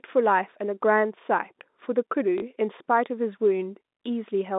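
A short robotic stutter breaks into the speech between 2.38 and 2.42 s, with a brief buzz near 50 Hz. This is packet loss with the last packet repeated: 40 ms went missing, which fits two 20 ms packets. The receiver replayed the final good one until fresh audio arrived. The telephone-band G.711 coding is audible as a 200 Hz to 3.7 kHz line sound.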